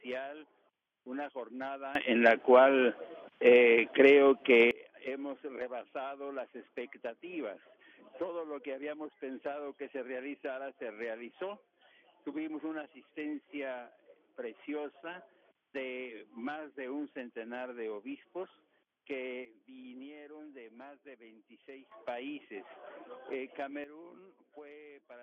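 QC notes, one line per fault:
1.95–4.71 s, 19.45–21.92 s, 23.84 s to end: sudden gain jumps, up about 18 dB, then down about 11 dB and 13 dB. Sound and background noise snap in level together, likely a gain change applied with no ramp.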